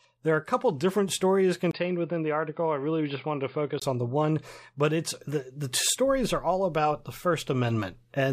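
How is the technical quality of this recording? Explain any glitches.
The recording has one clear glitch. From 1.71 to 3.82 s the speech goes dull and boxy, a few decibels quieter, with faint new background noise far beneath it, after a brief 20 ms gap. Nothing above 4.9 kHz survives. This is likely an input switched to a poorer device: a narrower-band microphone with its own tone took over, then the original returned.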